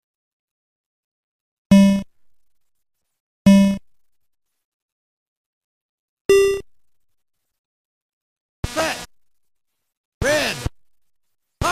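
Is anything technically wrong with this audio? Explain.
Yes. There is damaged data in a compressed stream at two points: once at 4.58 s and again from 9.03 to 9.06 s. At each spot part of the compressed data is corrupt. The decoder misreads or rejects those frames, loses its place in the stream, and has to hunt for the next valid frame header before normal playback resumes. Each event is heard as a brief chirp, squawk or blip that breaks into the sound.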